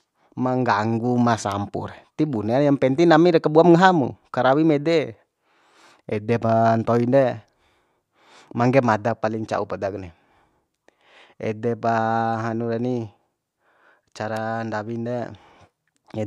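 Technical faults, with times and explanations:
1.52 s and 14.37 s, bit error spike: a flipped bit in memory or on a digital link corrupted a short run of about three consecutive samples at each point, jumping their values by a power of two to a peak near about −14 dBFS before snapping straight back. Because the jump is so brief and unrelated to the speech, each one comes through as a single sharp, broadband tick sitting on top of the sound.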